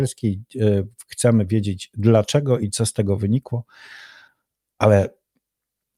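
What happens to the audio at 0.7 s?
Nothing goes wrong at 0.7 s; the speech there is intact, with no dropout, click or distortion.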